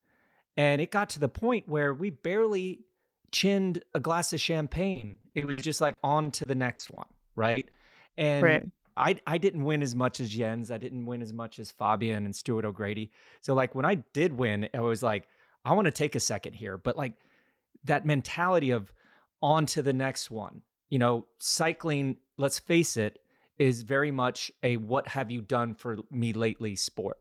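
Just after "chinned a glass of", from 4.91 to 6.99 s, repeated packet loss (robotic sound) sets in. Eighteen gaps of up to 60 ms are patched by extending the last sound, so about a fifth of the stretch turns choppy. Three isolated short concealed packet losses follow at 7.51, 7.59 and 7.71 s. Each lasts 20 to 40 ms and leaves only a brief smear or wobble, with no sustained robotic texture. From 10.83 to 11.15 s, just before "as much as", a jitter buffer speed-up trims a few hundredths of a second of pitch periods. The audio runs about 11% fast at unchanged pitch, sounding hurried but with no gaps.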